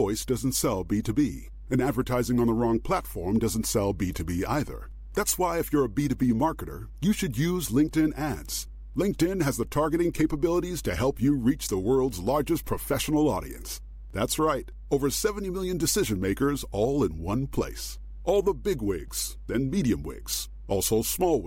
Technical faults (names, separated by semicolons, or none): mains hum